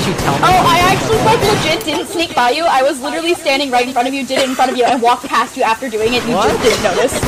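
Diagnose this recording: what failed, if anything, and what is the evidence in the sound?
Nothing in the recording stood out on listening that would point to a failure at any stage of the chain.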